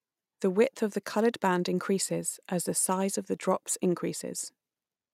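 Two devices in the chain are likely running on separate, unsynchronised clocks that disagree by roughly 500 ppm, so single samples are dropped or repeated each time the drift adds up to a whole sample. In this speech clip the resulting clock slip clicks run from 0.14 s to 5.11 s, arriving about every 50 ms, around a hundred in all, and blur into a faint, steady rattle riding on the voiced sound.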